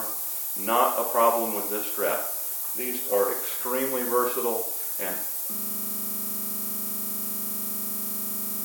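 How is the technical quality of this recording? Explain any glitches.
Technical quality is poor: a heavy coarse hiss runs through the whole recording, and the last few seconds lock into a repeating loop.

Low bit depth with noise shaping lasts from start to finish. The sound is stored with very few amplitude steps, which fits a 5-bit signal. The rounding error is fed back through a filter that pushes it toward high frequencies. This produces a thin, steady hiss that climbs sharply toward the top of the band and sits at roughly the same level as the sound itself. On a spectrogram it shows as a dense noise floor across the whole clip, brightest in the upper kHz range. On a waveform the trace looks fuzzy, with a thick band of noise around it.

A system hang loop starts at 5.55 s and lasts to the end. The machine stalled while the audio hardware kept replaying the same 40 ms stretch of its buffer, dozens of times over. 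The result is a rigid, mechanical buzz-stutter at 25 Hz, with no new sound coming through. A waveform shows one identical 40 ms segment tiled end to end. A spectrogram shows a frozen pattern with fine vertical striping every 40 ms, or harmonic lines spaced 25 Hz apart.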